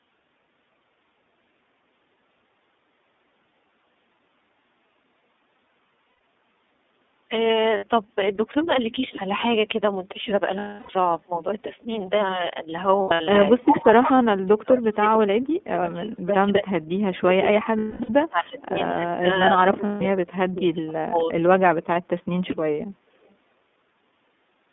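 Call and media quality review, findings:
iLBC codec, throughout the speech. Band limited to roughly 200 Hz to 3.6 kHz. Rough, slightly synthetic texture, plainly audible. Narrowband excitation coding; the sound fits the 13.33 kbps mode with 30 ms frames.

Lost iLBC frames at 6.09–6.17 s (120 ms), 7.77–7.84 s (60 ms), 10.59–10.96 s (330 ms, longest run about 0.3 s), 12.96–13.21 s (180 ms), 17.79–18.10 s (270 ms), 19.86–20.02 s (150 ms). Held buzzy vowel from pitch-cycle concealment, fading on longer gaps. Quick recovery after each gap.

Speech suppressed in double talk at 13.54–16.95 s, 17.18–18.75 s, 18.96–19.28 s and 19.47–21.31 s. Level dips and choppy dropouts, deepest about 40 dB, then about 35 dB and about 30 dB. Likely echo canceller attenuating the near talker while the far side speaks.

Echo leak at 18.58–18.62 s and 23.28–23.33 s. Brief delayed copy, 214 ms behind the speech, about 30 dB and about 40 dB down. 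Likely residual loudspeaker echo passing an echo canceller that did not remove it all and being sent back.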